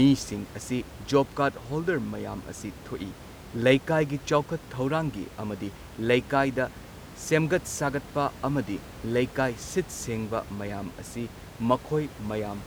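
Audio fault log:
No fault in this audio.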